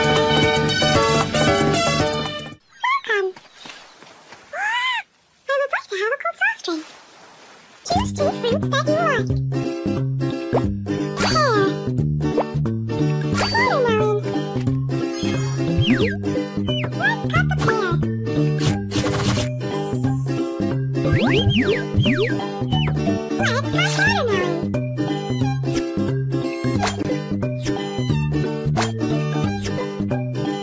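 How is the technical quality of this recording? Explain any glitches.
No glitches or dropouts can be heard anywhere in the recording, so there is nothing to explain.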